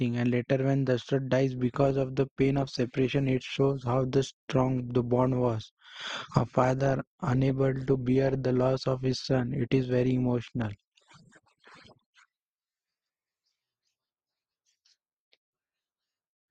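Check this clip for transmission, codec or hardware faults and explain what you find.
One transmission fault is present in the speech: an adaptive stream at a lower bitrate, from 1.57 s to 13.57 s. The connection slowed, so the player switched to a cheaper encoding for those twelve seconds and then switched back. The speech carries more codec artefacts. The drop and recovery are abrupt, with no gap or silence. The change fits a fall from roughly 64 kbit/s Opus to 24 kbit/s.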